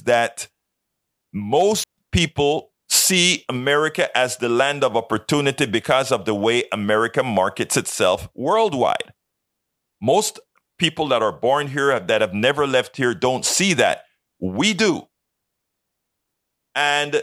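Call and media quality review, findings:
Digital wireless dropout, 1.84 to 1.98 s, just before "people see": clean 143 ms hole of near silence. Receiver muting after data loss on the digital link, with a fast fade. No noise burst or hiss either side, unlike an analogue RF dropout, and no smeared concealment fill.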